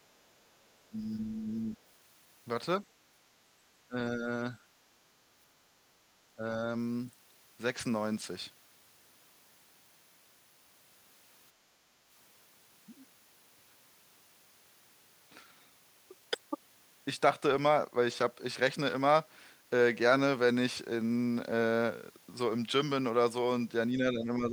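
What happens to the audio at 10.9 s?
At 10.9 s the speech runs on cleanly, with no dropout, click, distortion or other fault to be heard.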